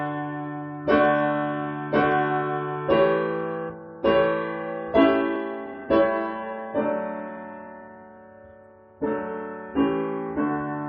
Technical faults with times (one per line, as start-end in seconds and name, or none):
3.69-3.71 skip ahead
5.35-6.73 jitter buffer speed-up